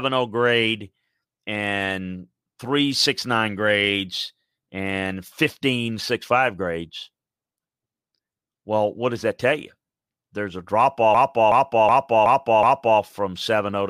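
Speech that, from 11.15 to 13.00 s, breaks into a machine-gun stutter as one 0.37 s fragment repeats exactly five times, about 2.7 per second. This is a system hang loop: the system froze while the sound hardware kept replaying the same ring buffer, which fits a 16384-sample buffer.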